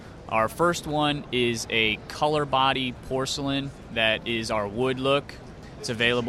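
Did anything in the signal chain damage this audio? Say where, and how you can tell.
No, nothing along the chain leaves an audible mark: the level, continuity and timing hold steady throughout, with no break, distortion or disturbance attributable to any stage.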